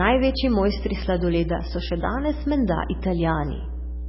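Speech runs with mains hum throughout: a steady 60 Hz tone, roughly as loud as the voice, shown on a spectrogram as a bright unbroken line with low harmonics. The speech also carries heavy, watery, swirly damage, with smeared attacks, likely from MP3 compression at a very low bitrate around 16 kbps. The spectrogram shows nothing above 5.6 kHz and patchy blocks flickering on and off.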